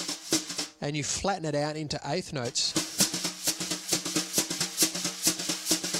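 No technical faults can be heard anywhere in the recording.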